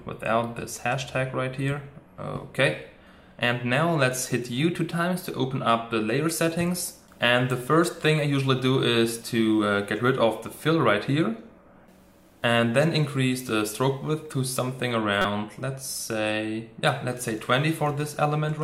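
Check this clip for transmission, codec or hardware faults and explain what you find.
One codec fault is present. From 15.22 to 15.25 s, a corrupt frame was decoded: damaged bits in a single frame misplaced energy, producing a brief glitch peaking near -10 dBFS, visible as a narrow vertical smear on the spectrogram.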